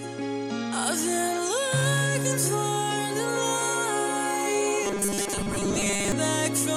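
From 4.83 to 6.12 s, robotic sound from repeated short buffers: a rigid 200 Hz buzz, likely from repeating one 5 ms buffer, replaces most of the audio, its pitch fixed rather than shifted.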